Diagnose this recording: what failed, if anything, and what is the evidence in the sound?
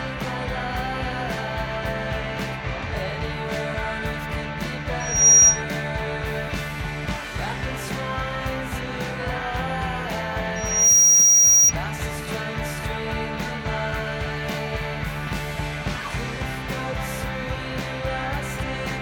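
The playback loudspeaker feeds back into the microphone, and the loop gain exceeds unity near 5.7 kHz. That produces loudspeaker feedback squeal at 5.00–5.62 s and 10.56–11.73 s: a single tone swelling within about a third of a second to roughly 15 dB above the sound.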